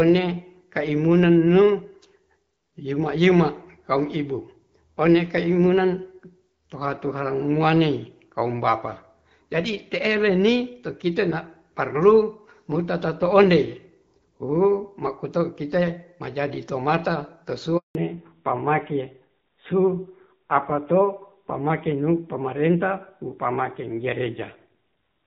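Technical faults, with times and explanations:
17.77–17.95 s, handover gap: the sound fades out within a few tens of milliseconds and stays silent for 180 ms while the call is passed from one network to another, so whatever was said in that window is simply gone. Unlike a packet-loss burst, there is no smeared, buzzy or robotic concealment filling the hole, just a clean silence, and the audio that returns has a different bandwidth.
17.95 s to the end, fallback to narrowband: after the gap everything above 4 kHz disappears, so the speech turns duller and rougher. Before the switch, the light coding texture with content reaching well past 4 kHz fits HD Voice at about 12.65 kbit/s. What follows fits AMR-NB at around 7.4 kbit/s. A mere bitrate drop within wideband would keep the upper band, but here the hard 4 kHz ceiling marks a true codec change.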